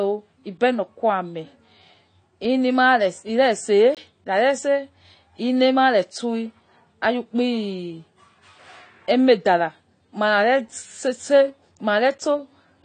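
Speech, dull and smeared throughout with nothing above 9 kHz and a warbling, fizzy edge on sibilants, likely AAC compression at a low bitrate around 32 kbps, unlike a plain low-pass, which leaves no swirl. From 3.95 to 3.97 s there is a block of digital silence: a 21 ms hole where the sound cuts out and back with no fade, which fits a 1,024-sample buffer not filled in time, not a dropout, which would fade or leave noise.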